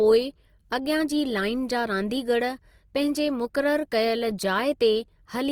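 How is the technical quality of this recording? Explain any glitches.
The recording is marred by clearly audible lossy-codec damage that runs through the whole clip.

Opus compression, throughout: the speech carries the grainy, rough texture of Opus in its music (CELT) mode, likely from encoding at a low bitrate, with the sound pointing to something around 24 kbps. Short of bits, the encoder keeps each band's overall energy but fills in fine detail by copying lower bands or substituting noise. The voice therefore turns hazy and granular. The full bandwidth survives, up to a 20.2 kHz cut-off.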